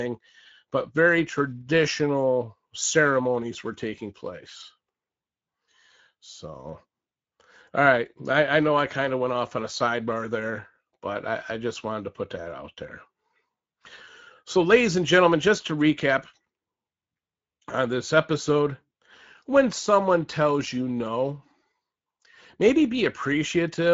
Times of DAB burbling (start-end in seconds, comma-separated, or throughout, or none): none